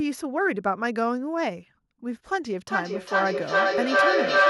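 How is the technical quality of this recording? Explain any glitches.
There's a clear problem from 2.67 s to the end: feedback echo between two devices. One device's speaker feeds the other's microphone, so speech loops back roughly every 0.4 s, building to about 7 dB above the speech.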